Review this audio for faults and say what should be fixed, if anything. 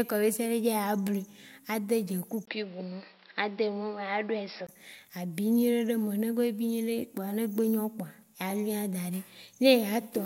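The recording input likely switched to a poorer device from 2.45 s to 4.69 s, before returning to the original path. The switch in opens with a 20 ms silence. Because the substitute input passes a narrower band, nothing above 5.5 kHz survives, so the speech turns dull and boxy. The loudness stays about the same, but a faint new background noise appears well below the speech. To prevent this, lock the recording to a fixed input device so the system cannot switch away mid-session.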